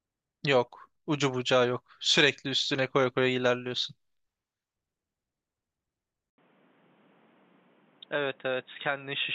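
At 6.3 s the system likely switched its input to a poorer device, leaving a brief 80 ms silence at the switch. From there to the end, the speech has nothing above 3.8 kHz, so it sounds dull and boxy. It is also somewhat quieter and carries a new, faint background noise.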